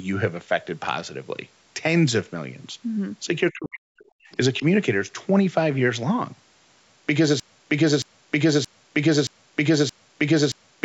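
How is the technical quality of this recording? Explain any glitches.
The recording has three distinct glitches, all typical of a voice call. Nothing is heard above 8 kHz, consistent with call microphone processing.

From 3.52 to 4.24 s, there is speech suppressed in double talk. The talker's speech dips in pieces, by roughly 40 dB at its deepest, likely because the echo canceller could not tell this talker from loudspeaker echo while both sides spoke. On a spectrogram, the energy thins and drops out in patches.

From 4.31 to 4.37 s, the other side's voice leaks through. A brief, faint scrap of a second voice sits about 30 dB below the speech, likely as leftover loudspeaker echo the canceller failed to remove. On a spectrogram, it shows as a faint harmonic smear after the suppressed stretch.

From 7.40 s to the end, a broken-record loop takes over. The same 0.62 s fragment repeats six times back to back, and the audio that should have played is lost. 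This is likely a stalled player or stream resending its last buffer. On the waveform, identical blocks tile evenly to the end.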